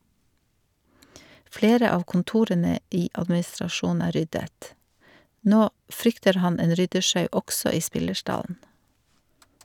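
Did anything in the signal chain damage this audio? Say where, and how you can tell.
No, nothing along the chain seems to have touched this speech recording, so there's no stage to point a finger at.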